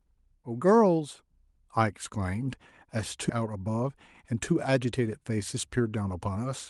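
At 3.29 to 3.31 s the speech jumps forward in a skip ahead: roughly a second of audio is simply gone, and the two sides are butted together with no silence between them. That missing gap is what separates it from a dropout, which would leave an audible hole.

From 3.39 s to 6.37 s a jitter buffer speed-up follows. The buffer was holding too much delayed audio, so the receiver kept trimming small pitch-period slices, about 0.3 s in total, to catch up. The speech runs about 10% fast and sounds hurried, but the pitch stays where it was, unlike a simple resampling speed change, which would raise it. Throughout, the Opus call path limits the top end to about 12 kHz.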